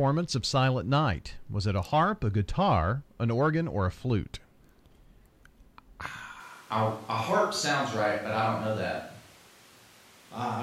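Switch to a distant microphone at 6.4 s, lasting to the end: the voice suddenly turns roomy and hollow, the bass thins, and room noise rises to roughly 25 dB below the speech while the level barely changes. The close microphone likely dropped out, leaving a farther pickup.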